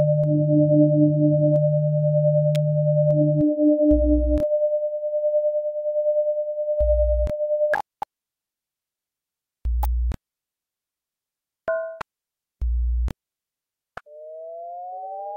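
A nearby switch or discharge likely arced onto the line, an electrical switching spike: sharp snaps around -15 dBFS at 2.55 s and 9.83–9.85 s.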